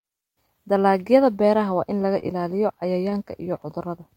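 A brief smear breaks the speech at 2.19 to 2.24 s and again at 3.10 to 3.13 s. Both are short concealed packet loss: about 20 ms of audio arrived too late, and the receiver filled the gap by extending the preceding sound before blending back.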